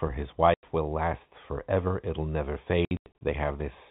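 At 0.54 s, just before "will last forever it'll", the speech drops to dead silence for 90 ms, and from 2.85 to 3.15 s, after "last forever it'll never", several holes of up to 90 ms scatter. This is packet loss filled with silence. Unlike concealment, there is no smeared or repeated sound, only abrupt gaps that fit 30 ms packets, over the band-limited G.711 telephone sound.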